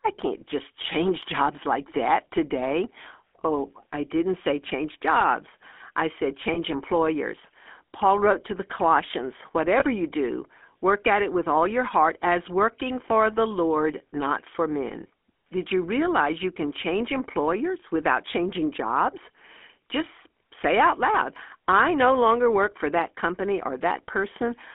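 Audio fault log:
Throughout: GSM full-rate codec. The speech has a plain buzzy, gravelly roughness. The codec models the vocal tract and feeds it a sparse train of regular pulses, so fine detail in the excitation is lost and the voice turns grainy. The band is held to roughly 250 Hz to 3.4 kHz, so it sounds thin and muffled. The coarseness fits the 13 kbps full-rate coder.
6.54 to 6.58 s and 9.80 to 9.84 s: lost GSM frames. Each time one 20 ms frame goes missing. The decoder fills the gap by repeating the last good frame's settings. This gives a short, rough, metallic ring instead of a clean dropout. Both gaps are brief, so the sound is held only for an instant before normal decoding resumes. It never fades to silence.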